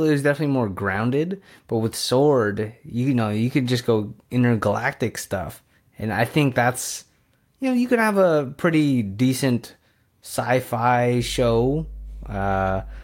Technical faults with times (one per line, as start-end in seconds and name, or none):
11.18-13.03 mains hum